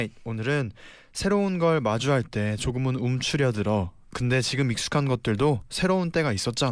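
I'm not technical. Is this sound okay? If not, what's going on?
Yes, this sound is okay, and nothing is going on that needs fixing.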